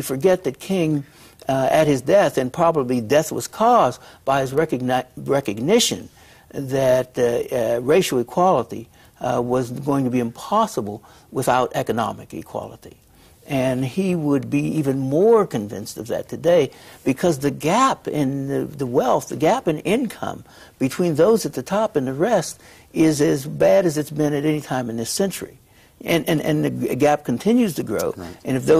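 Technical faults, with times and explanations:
No technical faults detected.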